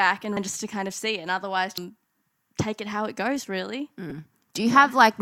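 At 0.37 s, 1.78 s and 4.08 to 4.12 s, the speech breaks into brief glitches. This is damaged data in a compressed stream. Corrupted bytes make the decoder misread frames and lose sync. It then hunts for the next valid frame header.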